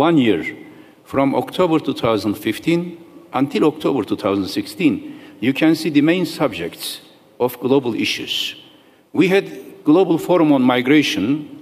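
No technical fault can be heard anywhere in this audio. The sound stays continuous and steady throughout, with nothing breaking into it.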